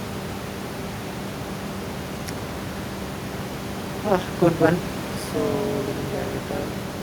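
Speech over room noise, about 11 dB below it, develops an overlap-add ripple from 1.12 s to the end at 7.02 s. Frames were rejoined with windows whose overlap doesn't sum to constant gain, so level dips about 60 dB roughly 200 times a second, a harsh robotic buzz. The waveform shows a dense comb of regular notches, and the spectrogram shows closely spaced vertical stripes.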